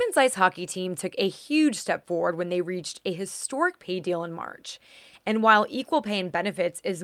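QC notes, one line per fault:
No faults found.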